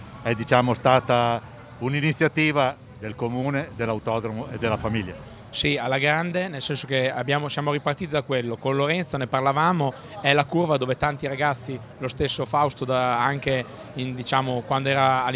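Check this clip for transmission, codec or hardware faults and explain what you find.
Nothing detectable here: no transmission, codec or hardware fault shows up anywhere in the audio.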